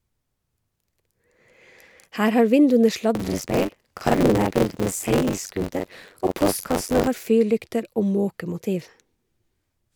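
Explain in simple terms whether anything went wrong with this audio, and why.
Something did go wrong, from 3.15 to 7.08 s, just after "har vinduene". The speech takes on a robotic buzz, about 94 times a second. This is buffer tearing. The program feeding sound to the hardware fell out of step with it. So each small chunk of audio is partly stale. Nearly half of each chunk replays sound from a moment earlier. Hard joins between old and new make the rattle. That rate fits a 512-sample buffer.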